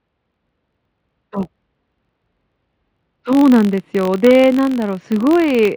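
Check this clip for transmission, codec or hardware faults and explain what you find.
One fault runs through the whole speech clip: a filter restarted on every block. From start to finish, a faint tick repeats at 46.9 Hz, which fits a 1024-sample block. Each block's filter starts from silence instead of carrying its state forward, so every block begins with a small transient. The ticks merge into a low buzz that rises and falls with the speech level. Mains hum would stay steady through pauses.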